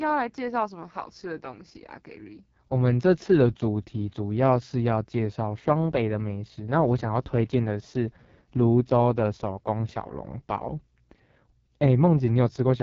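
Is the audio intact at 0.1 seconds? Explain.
No. At 0.1 s, as everywhere in the clip, the speech carries the AMR wideband (HD Voice) codec at a heavily damaged setting. The codec models the voice as pulses driving a vocal tract filter up to 6.4 kHz and fills the band above with shaped noise. Here there is nothing above about 7.3 kHz, and the rough, raspy texture fits the lowest 6.6 kbit/s mode, where too few bits remain to code the excitation faithfully.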